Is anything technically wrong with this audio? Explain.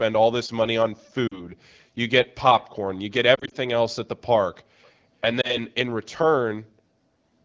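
Yes, there are lost AMR speech frames at 1.27–1.43 s, 3.35–3.54 s and 5.41–5.57 s. The decoder covers each loss by reusing the last good pitch and vocal tract settings at falling gain, so you hear short warbly dips, choppiest around 3.4 s.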